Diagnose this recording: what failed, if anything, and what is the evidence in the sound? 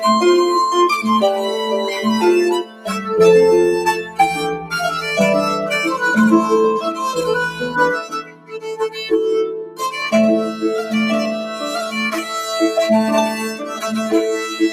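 Call processing: a speech noise suppressor stayed on, pumping the level by roughly 10 dB. Held tones and tails sink while attacks pass, which sets it apart from compressor pumping.

Sound cut by the noise suppressor at 2.62–2.89, 4.02–4.19, 4.56–4.72, 8.01–9.06, 9.47–9.82 and 13.53–13.83 s. The level sinks by about 7 to 13 dB rather than dropping out abruptly.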